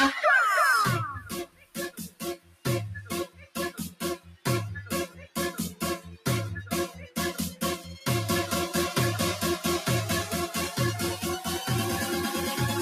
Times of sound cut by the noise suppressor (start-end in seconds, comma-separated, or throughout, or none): 1.20-2.66, 3.26-4.46, 5.07-5.37